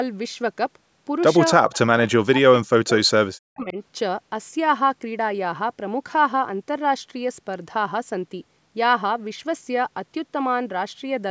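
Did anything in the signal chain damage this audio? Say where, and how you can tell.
Yes. Speech suppressed in double talk hits the speech at 1.65 to 2.94 s and 3.31 to 3.77 s. Level dips by up to about 40 dB in chunks, likely from the call echo canceller clamping during simultaneous talk. The waveform shows gouged gaps, and the spectrogram shows speech bands vanishing.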